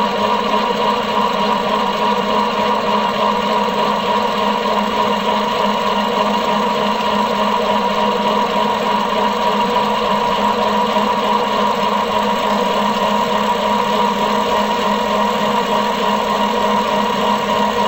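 From start to finish the audio plays at half speed and a full octave low, everything slowed and deepened. This is stereo read as mono: interleaved left and right samples were read in sequence as one channel, doubling the sample count and pushing a faint mirrored image into the upper spectrum.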